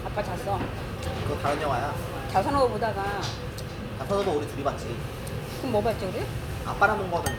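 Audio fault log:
No fault is found in this audio.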